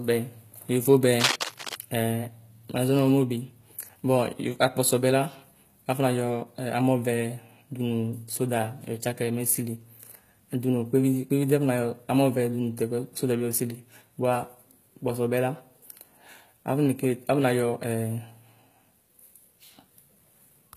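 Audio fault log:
Throughout: HE-AAC compression, likely. Plainly audible damage in the treble, which is rebuilt from copied lower bands. Nothing above 14.9 kHz, consistent with about 20 kbps.
1.21–1.76 s: cable scratch noise. Dense, uneven scratching sits over the speech, nearly as loud as it. The likely cause is a worn contact being moved.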